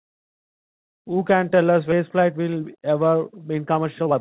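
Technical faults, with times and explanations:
1.92 s, skip ahead: the speech lurches forward with no gap, and roughly 0.7 s of audio is just gone. A chunk was dropped while later audio was already queued, so both sides of the jump get spliced almost directly together.
2.16 to 4.20 s, jitter buffer speed-up: from here to the end the speech runs about 116% fast at unchanged pitch, so it sounds rushed. The buffer was overfull, so the receiver kept clipping out tiny pitch-period slices, around a third of a second in total, to cut the delay. All of this sits on a band-limited line with nothing above 4 kHz, which fits a narrowband G.711-style call codec.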